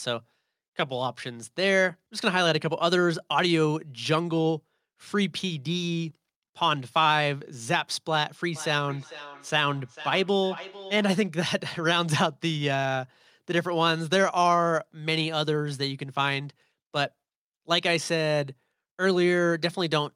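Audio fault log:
8.56–11.28 s, feedback echo between two devices: the speech comes back at a steady interval of about half a second, thin and ringing, peaking about 16 dB below the speech, because a second device on the call replays this microphone's signal into the room, where it is picked up again and missed by the echo canceller.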